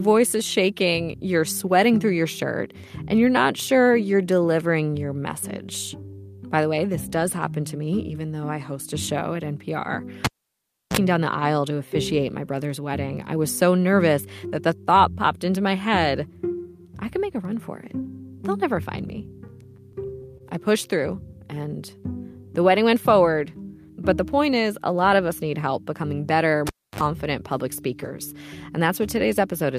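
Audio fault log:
10.25–10.97 s: cable pulled and plugged in. A pop, then about 0.68 s of near silence. A 37 ms burst of 60 Hz buzz comes as the plug tip touches, then another pop as the sound returns.
19.47–20.42 s: repeated stalls (stutter). The playback buffer ran dry seven times. Each gap was bridged by stretching the preceding sound, 88 ms in total, the longest gap 26 ms. Nothing is lost, but the passage drags and stutters.
26.67–27.01 s: cable pulled and plugged in. A pop and about 0.29 s of near silence. A 51 ms burst of 50 Hz mains buzz comes at reinsertion, then a second pop.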